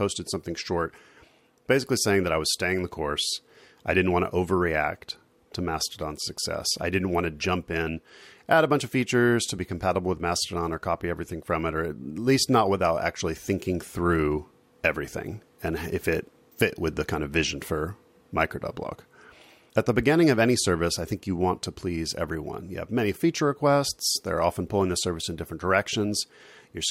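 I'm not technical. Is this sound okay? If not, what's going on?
Yes, this sound is okay, and nothing is going on that you need to worry about.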